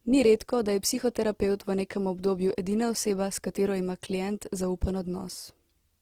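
From start to finish the speech carries Opus compression damage, plainly audible as a rough, grainy texture on voiced sounds. The likely cause is an encoder in its music (CELT) mode starved of bits, which fits a low rate near 16 kbps. Band energies are kept, but fine detail is replaced with folded or noise content. On a spectrogram the full bandwidth stays filled, with few gaps, while harmonic lines blur into speckled noise, especially higher up.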